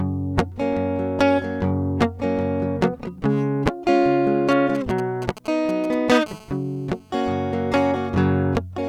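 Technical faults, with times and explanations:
4.51 to 6.18 s: GSM signalling bursts. A 2G phone somewhere close is chatting with its network without being in a call, sending short clusters of radio bursts that the audio circuitry rectifies into sound. You get that galloping dit-dit-dit of ticks and brief buzzes at the 217 Hz burst rate, sitting roughly 15 dB under the music and bearing no relation to it, coming in clumps rather than as a continuous tone.
6.26 to 7.15 s: GSM phone buzz. Right after the signalling, the phone settles into a call and transmits its bursts steadily at 217 Hz. Each radio pulse gets rectified by the audio path, so the chopped carrier turns into a hard, raspy buzz at 217 Hz carrying a stack of harmonics. It's unbroken for the whole stretch, about 25 dB below the music, and it ignores whatever the music is doing.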